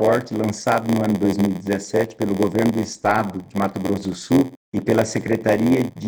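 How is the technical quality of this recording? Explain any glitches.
The recording has one fault throughout. Block size mismatch (padded) runs from start to end: each block arrives short and is zero-filled, giving an 86.1 Hz buzz, fitting a 512-sample read block, and playback at 0.938 speed.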